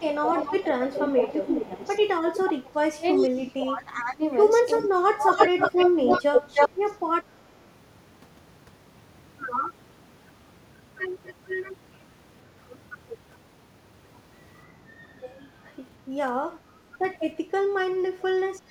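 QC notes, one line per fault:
0.00–6.68 s, echo leak. A delayed copy of the speech comes back about 0.38 s behind the original. It sits at roughly the level of the direct speech, or a little above it, so it competes rather than trailing off. The copy is likely loudspeaker sound from the far end that the echo canceller there failed to remove from its microphone feed. It was then sent back down the line.
0.00–6.93 s, speech suppressed in double talk. Across about four seconds the speech dips in and out. At its worst it drops by roughly 25 dB, which is nearly gone. This is likely the echo canceller facing both sides talking at once. It could not tell the local talker from the echo, so it turned everything down.
15.03–15.08 s, 16.89–16.98 s, 18.18–18.24 s, speech suppressed in double talk. Three brief dips follow, each about a tenth of a second or less. They are mild, moderate and in between, at roughly 5, 15 and 10 dB. 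They sound like short gulps in the speech where the same suppression likely briefly clamps down.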